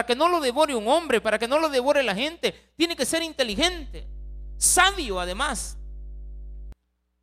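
From 3.52 s to 6.72 s a mains hum sits under the speech: a steady 50 Hz tone with some low harmonics, fairly prominent at roughly 15 dB below the speech. The power line has leaked into the signal path, typically through a ground loop or nearby transformer.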